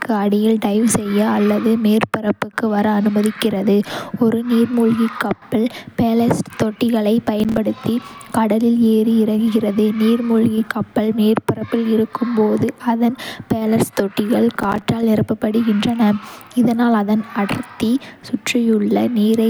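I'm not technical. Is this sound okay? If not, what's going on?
No. There's processor overload crackle at 7.28–7.58 s, after "நீர்மூழ்கிக் கப்பல் பேலஸ்ட் தொட்டிகளைப்", and at 14.56–14.87 s, between "பேலஸ்ட் தொட்டிகள்" and "நிரப்பப்படுகின்றன இதனால் அதன் அடர்த்தி". The computer fell behind, dropping tiny slivers of audio, which you hear as gritty crackling.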